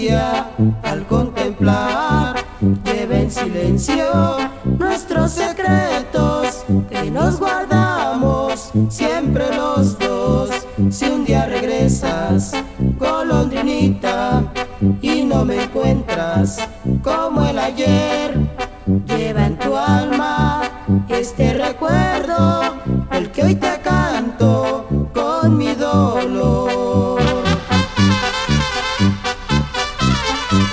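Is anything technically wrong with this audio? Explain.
No, nothing's wrong here: it's come through a call connection that's doing its job, and the way everything tops out around 8 kHz is just what you'd expect from a wideband call codec such as G.722 at 64 kbps.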